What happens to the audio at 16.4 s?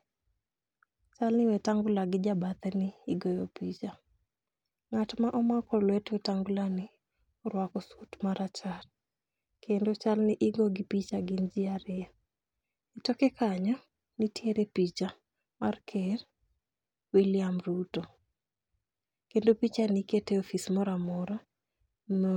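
At 16.4 s the speech continues cleanly, with no dropout, click, distortion or other fault to be heard at that point.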